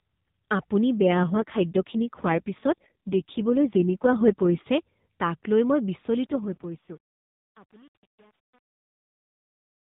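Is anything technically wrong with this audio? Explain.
Yes. There are two kinds of fault in this speech.

AMR rate drop. From 0.99 to 4.69 s the voice turns rough and synthetic, ending just before "তাক লৈ". It happens again from 6.30 to 7.59 s. The band stays below 4 kHz throughout, as the AMR narrowband codec allows. There is no gap. The codec was told to spend fewer bits on the voice. The texture points to a fall from 12.2 kbps to the lowest mode, about 4.75 kbps. Clarity returns when the rate recovers.

Truncation distortion on a fade. The clip fades out from about 6 s to 9.97 s. From 5.94 s to the end, the fade carries grit. It is worst from 6.34 to 9.97 s. The volume stage kept too few bits and added no dither, which fits an 8-bit stage. As the level sinks toward the smallest step, the waveform becomes coarse stairs. The quiet tail sounds gritty.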